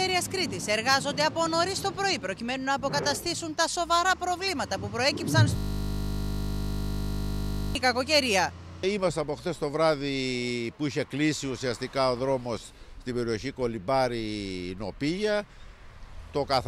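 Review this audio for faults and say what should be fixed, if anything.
From 5.57 to 7.75 s the audio turns into a steady 50 Hz buzz. This is a system hang loop: the system froze while the sound hardware kept replaying one 20 ms ring buffer more than a hundred times. A driver watchdog that mutes output when buffer refills stop would prevent it.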